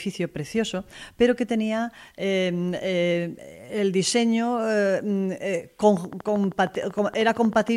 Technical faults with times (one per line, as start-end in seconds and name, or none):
5.97-7.69 train of clicks